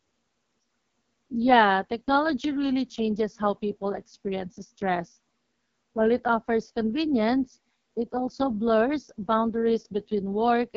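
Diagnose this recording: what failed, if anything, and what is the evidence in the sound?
The codec stage failed: the speech runs through the AMR wideband (HD Voice) codec for the whole clip, and the rough, raspy texture of heavy damage points to its lowest mode, around 6.6 kbit/s. At that rate the pulse-driven vocal tract model can't track the speech finely. A simple low-pass or narrowband path would dull the sound rather than roughen it, and here the band still reaches 7.2 kHz.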